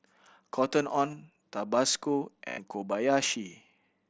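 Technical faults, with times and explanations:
1.11–1.13 s and 2.48–2.58 s, concealed Bluetooth headset packet loss: gaps filled by repeating recent waveform, so they buzz at steady level and warble on return rather than falling silent.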